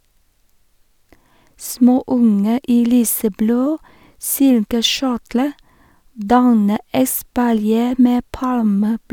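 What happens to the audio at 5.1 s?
Nothing goes wrong at 5.1 s; the speech there plays through intact, with no dropout, click or distortion.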